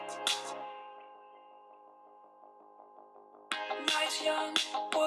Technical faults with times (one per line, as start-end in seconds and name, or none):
0.51 compressed frames skipped
4.09 compressed frames skipped